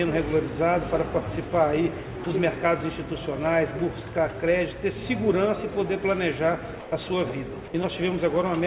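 At 2.24 to 2.26 s, 6.80 to 6.92 s and 7.68 to 7.74 s, the sound is dropped by the voice detector. Each time it gives way to a flat, steady comfort noise and then returns. The gaps last 20 ms, 120 ms and 60 ms. The likely cause is the sender's detector mistaking quiet sound for background and pausing transmission, so the receiver filled in. Through the G.711 call path, nothing is heard above 4 kHz.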